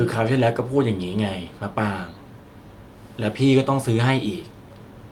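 No technical faults can be heard anywhere in the recording.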